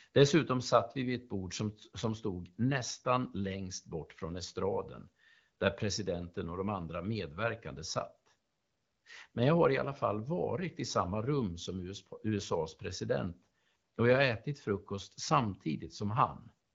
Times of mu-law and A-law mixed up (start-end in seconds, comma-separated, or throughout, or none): none